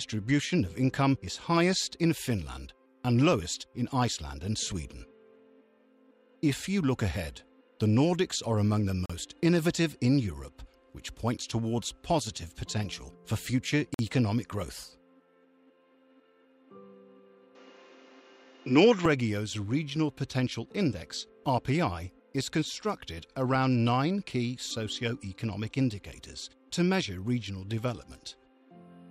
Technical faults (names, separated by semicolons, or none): Bluetooth stall; input switched to a poorer device